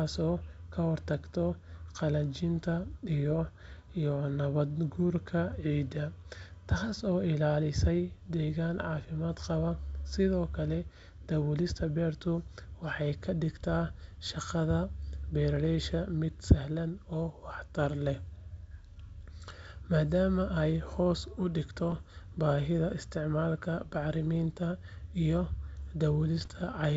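Bit errors on an ADPCM link hit this speech clip twice, with roughly half a percent of bits flipped. Because each corrupted code also throws off the decoder's step size and predictor, the damage rings on past the flipped bit itself. The sound turns into pops and a rough, level-jumping burst from 21.90 to 22.01 s, just after "ay hoos u dhigto", and again from 26.38 to 26.48 s, each fitting a handful of corrupted frames on a clean wideband G.722 connection.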